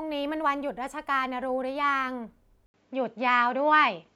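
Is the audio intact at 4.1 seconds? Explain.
No, at 4.1 s it's still inside a stretch from 2.66 s on where the input likely switched to a poorer device: an 80 ms gap, then duller audio capped near 7.6 kHz, slightly different level, faint new hiss.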